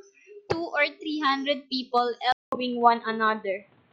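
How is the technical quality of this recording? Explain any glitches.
The speech has one clear glitch. At 2.32 s, after a 200 ms gap, it turns dull, cut off above 4.3 kHz, with shifted level and faint new noise. This is likely an input switched to a poorer device, not a codec bandwidth drop.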